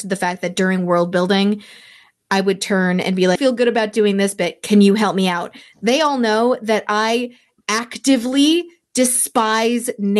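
Speech carried over a call path whose band-limited Opus coding tops out around 12 kHz has a skip ahead at 3.35 to 3.37 s. About a second of audio is simply gone, and the two sides are butted together with no fill, because audio was dropped, in transit or by the jitter buffer, while later audio was already waiting. Right after, from 3.46 to 5.23 s, a jitter buffer speed-up runs playback at 105% with pitch unchanged. Short pitch-period slices, totalling roughly a tenth of a second, are cut repeatedly to drain excess buffered delay, so that stretch sounds slightly hurried.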